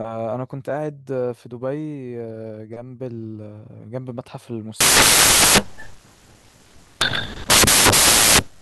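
Samples built from the wrong bytes, from 4.81 s to the end: misassembled bytes push each sample's fast-changing low bits to the top, turning the speech into loud, harsh broadband noise.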